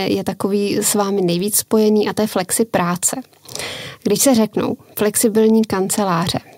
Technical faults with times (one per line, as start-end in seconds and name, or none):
none